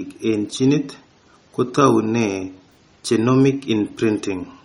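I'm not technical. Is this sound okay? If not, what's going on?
No. Throughout the speech there is a watery, swirly quality, with metallic chirps on s sounds and smeared consonant starts. This is likely MP3 compression squeezed too hard, so faint parts of the sound flicker on and off from moment to moment. Unlike a simply muffled or dull recording, the treble isn't missing, since sound reaches up to about 19.2 kHz. The problem is this bubbling, chirpy texture rather than lost brightness.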